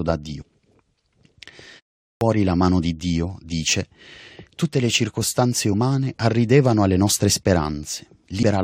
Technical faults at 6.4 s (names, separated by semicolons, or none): none